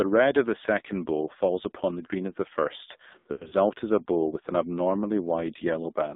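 Throughout, the audio passes through the AMR narrowband mobile codec at a low bitrate, consistent with around 5.9 kbps, which confines the band to about 200 Hz to 3.7 kHz and leaves the speech heavily buzzy and synthetic.

From 3.20 to 3.54 s, between "green of the first" and "is a bow with", lost AMR speech frames, totalling about 220 ms with a longest run of 100 ms, force the decoder to repeat fading parameters, so the speech smears, warbles and briefly drops out.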